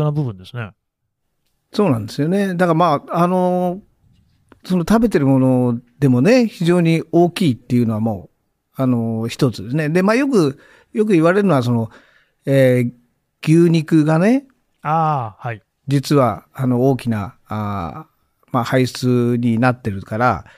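Nothing goes wrong anywhere in this speech recording, so there's no technical fault to point to.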